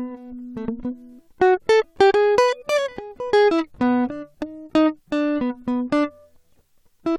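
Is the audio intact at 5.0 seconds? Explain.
Yes, at 5.0 seconds the music plays through intact, with no dropout, click, distortion or other technical fault to be heard at that point.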